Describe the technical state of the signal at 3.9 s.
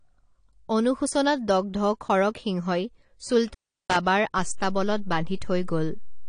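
At 3.9 s the signal is inside an intermittent contact fault running from 3.48 to 3.96 s. A loose connection opens for about 355 ms, so the sound drops out with crackle at both edges and only faint hiss underneath. That crackle and leftover hiss set it apart from a clean digital dropout, which would fall to true silence. The whole clip also carries AAC compression artefacts: nothing above 10.1 kHz, and a smeared, warbling, fizzy texture on sibilants. This is likely AAC-LC at a low bitrate, around 32 kbps. The warble and fizz distinguish it from a plain low-pass filter, which would sound dull but clean.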